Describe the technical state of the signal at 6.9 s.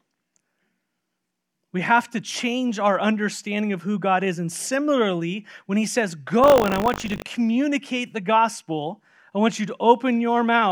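At 6.9 s the speech carries a steady robotic rattle buzzing at 50 Hz, from 6.42 to 7.24 s, just after "similarly when he says". This is buffer tearing: writer and hardware reader have slipped, so a small slice of each period replays audio from roughly 70 ms earlier, joined hard at both edges.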